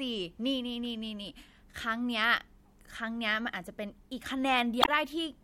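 At 4.80 to 4.89 s, damaged data in the compressed stream makes the decoder misread the frames and lose sync, producing a short glitch in the speech.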